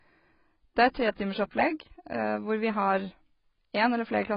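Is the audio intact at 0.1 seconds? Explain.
No. At 0.1 s, as throughout the speech, the audio is band-limited with nothing above 5.4 kHz and sounds dull, smeared and warbly. This is likely heavy AAC compression, with AAC-LC quantising frequency lines coarsely at a bitrate near 16 kbps.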